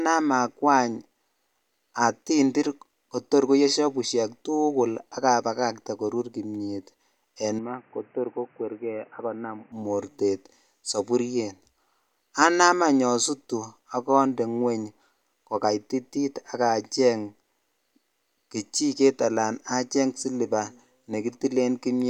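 A speech clip that turns dull and boxy from 7.59 to 9.72 s, with nothing above 3 kHz, a level drop of about 5 dB and a new noise floor roughly 30 dB down, switching just before "mortet sapuriet". The likely cause is an input switched to a poorer device.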